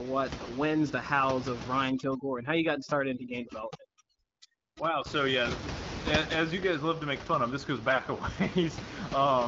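From 0.38 to 0.48 s, AMR bit errors corrupt weakly protected bits, misplacing excitation pulses and gains. The sound turns gargly and scratchy, and the spectrogram shows smeared, broken harmonics. From 1.90 to 5.06 s, overdone noise removal mutes bands near its noise estimate, so the background drops and breaks up, with near-black gaps dotted by twinkling specks. The bit errors return from 7.89 to 8.06 s as a brief hoarse burst.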